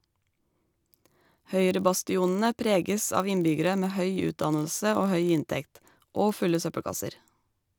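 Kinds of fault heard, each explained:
Block size mismatch (padded), throughout: each block written is slightly shorter than the 1024 samples the next stage reads, so zeros fill the remainder, leaving a brief gap every block. This produces a steady buzz at 46.9 Hz, while the speech slows by only 0.999 times.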